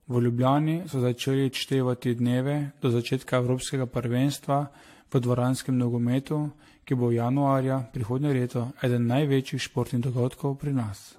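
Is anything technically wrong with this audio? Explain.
Yes, there's generation loss throughout this speech: swirly, hollow, smeared attacks, nothing above 16.6 kHz, likely from re-encoding around five times with something like 64 kbit/s AAC.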